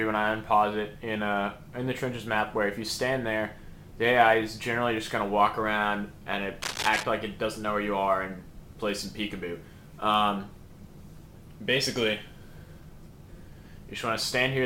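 At 6.62 s a burst of cable scratch noise cuts in and lasts until 7.04 s: dense, uneven scratching and rustling sitting only slightly below the sound itself. This is likely a worn cable or connector being moved, its contact resistance fluctuating rapidly.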